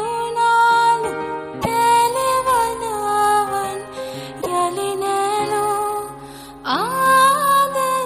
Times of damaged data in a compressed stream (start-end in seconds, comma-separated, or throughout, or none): 1.58-1.67, 4.38-4.47